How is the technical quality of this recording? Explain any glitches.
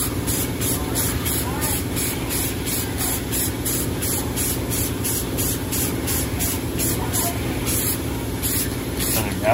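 No technical glitches turn up anywhere in this recording. There is nothing in it that calls for an explanation.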